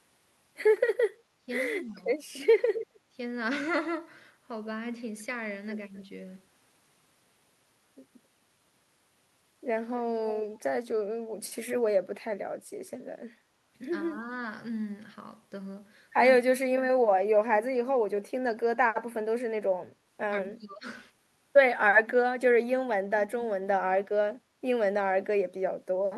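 Speech with two kinds of fault. Speech suppressed in double talk occurs at 1.36–2.04 s, at 10.8 s, at 16.55–17.29 s and at 20.58–22.89 s. The voice briefly sinks or breaks up, with dips of roughly 15 to 30 dB, the deepest near 17 s. On a spectrogram these show as short vertical gaps or faded bands, the high frequencies thinning. The waveform envelope pinches in abruptly. The likely cause is an echo canceller that, with both sides talking, could not tell this talker from loudspeaker echo and attenuated everything. Echo leak appears at 2.74–6.05 s and again at 18.19–19.03 s. A delayed copy of the voice trails it by 265 ms, about 10 dB down in the first stretch and near 20 dB down in the second. A spectrogram shows ghostly repeats of the harmonic patterns shifted right by about a quarter second. The waveform carries a smaller duplicate of each burst. This is likely residual loudspeaker pickup that the far end's canceller failed to remove.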